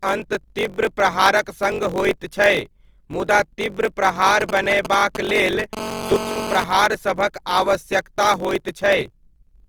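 Block size mismatch (truncated) runs through the whole clip: one stage writes blocks longer than the next reads, so each block's tail is discarded. That leaves a steady buzz at 45.9 Hz and speech running 1.07 times fast at near-normal pitch, which fits 1024-sample blocks being written.

Also throughout, the speech sounds rough and grainy rather than swirly, with content still reaching about 20.2 kHz. This is likely Opus compression in its music (CELT) mode, filling starved bands with folded or noisy energy, consistent with a low rate around 24 kbps.

GSM signalling bursts appear from 4.27 to 5.75 s, just after "मुदा तीव्र": a nearby 2G phone sending short groups of radio bursts, rectified by the audio circuit. It sounds like a galloping dit-dit-dit of brief 217 Hz buzzes, roughly 5 dB below the speech.

GSM phone buzz follows from 5.77 to 6.64 s, as the phone switches to continuous call transmission at 216.7 bursts per second. 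The rectified pulses give a hard, raspy, harmonic-rich 217 Hz buzz, steady and unrelated to the speech, about 7 dB below it.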